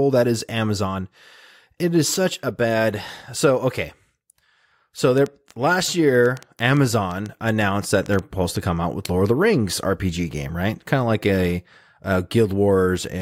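From 5.18 to 8.57 s a train of clicks runs over the speech, ending just before "to come out with". About fifteen similar pops arrive at roughly 4.7 per second but at an uneven pace, rising a few decibels above the speech and ticking through the pauses too. The likely cause is interference from nearby equipment or a faulty connection or power supply. On a waveform they show as narrow, repeated spikes; a spectrogram shows thin vertical broadband lines at irregular spacing.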